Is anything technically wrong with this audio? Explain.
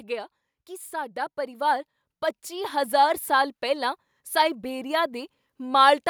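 Yes. This speech clip has automatic gain rising twice. From 0.51 to 1.96 s the level climbs by about 5 dB, then again from 2.48 to 5.4 s by about 6 dB. The gain control judged the input too quiet and pushed its gain up gradually rather than in a step, so the voice and the background noise swell together. It's a slow creep, the room tone lifting along with the talker, which is the giveaway that it's the gain stage and not the speaker getting louder.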